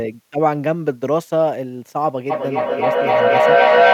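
From 2.3 s to the end, the speech starts coming back about every third of a second, each return thinner and more ringing than the last. The repeats build rather than fade, peaking about 6 dB above the speech itself. This is feedback echo between two devices: two devices in the same room were on the call, and one played back what the other's microphone had sent. That microphone caught it again, and neither echo canceller could remove sound played by the other device, so the loop kept feeding itself.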